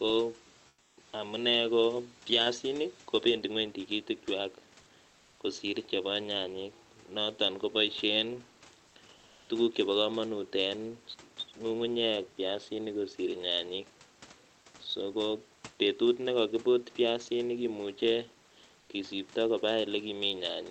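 In the speech pauses at 0.68–0.97 s, 5.08–5.40 s, 8.87–8.95 s, 9.16–9.49 s and 18.80–18.89 s, comfort noise takes the place of the background. The room noise becomes a flat, featureless hiss, about 8 dB quieter in the first gap and nearly level in the others, likely from Opus DTX.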